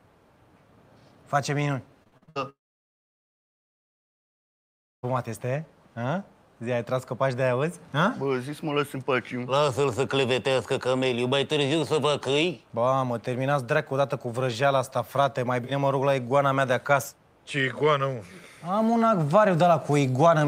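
From 2.03 to 2.37 s the sound turns choppy, with a robotic edge as brief pieces drop out and are bridged by a smeared copy of what came just before. This is repeated packet loss (robotic sound): a handful of holes, the longest about 63 ms, each filled by extending the last good audio. Together the fills cover roughly 59 percent of that short span.

At 2.49 s the audio breaks off. A brief buzzy continuation of the last sound fades away, and what follows is essentially silence until the audio resumes at 5.05 s, picking up later with about 2.5 s simply gone. The likely cause is a long network dropout: nothing reached the receiver for that stretch, so it could only stretch out the final fragment before giving way to quiet.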